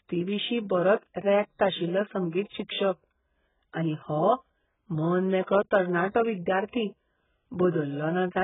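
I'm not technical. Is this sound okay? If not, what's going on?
No. The speech sounds dull and muffled throughout, with nothing above about 3.8 kHz, and has a warbling, fizzy texture on hissing sounds. The likely cause is heavy AAC compression. A plain treble cut would sound muffled but clean, without that watery smearing.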